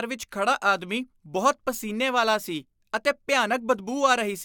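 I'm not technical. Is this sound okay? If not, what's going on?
Yes, it's fine: I don't hear anything going wrong in this recording, so there's nothing you need to worry about.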